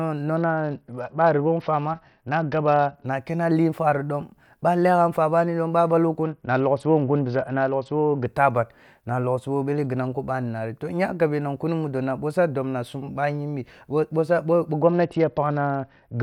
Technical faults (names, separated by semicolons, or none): Bluetooth SBC bit pool drop